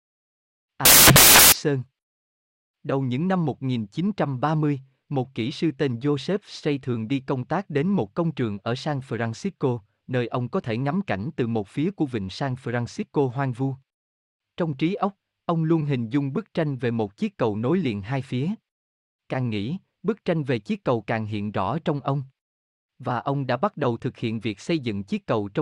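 Samples built from the wrong bytes occur from 0.85 to 1.52 s in this speech clip. The reader assembles each sample with its bytes misaligned or swapped, so the rapidly changing low-order bits land in the high positions. The result is a burst of loud, harsh broadband noise.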